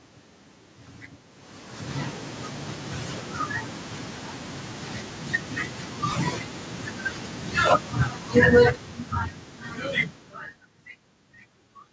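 Automatic gain falling runs from 7.62 to 9.59 s: the gain control judged the input too loud, or its background noise too strong, and eased its gain down by about 9 dB over those two seconds, so the speech sinks steadily and the room noise behind it drops by the same amount.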